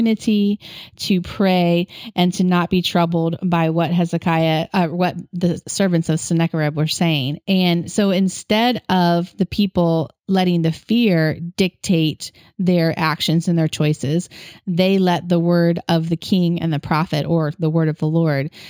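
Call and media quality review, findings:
Imaging from linear upsampling, throughout. The speech top end sounds dulled, with a faint metallic shimmer on sibilants. This points to a 16 kHz source resampled to 44.1 kHz by straight-line interpolation. The weak filtering leaves a mirrored spectrum between 8 and 16 kHz, roughly 30 dB down.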